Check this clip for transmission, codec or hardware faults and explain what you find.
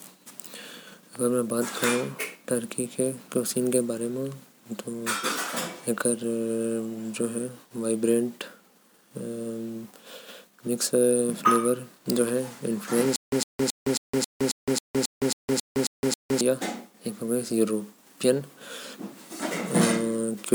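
One fault: a stutter with silent gaps from 13.16 to 16.41 s. A 107 ms burst of speech repeats 12 times, each followed by 164 ms of digital silence (271 ms cycle), likely a stalled stream replaying its last fragment. Waveform and spectrogram show identical blocks separated by flat, empty gaps.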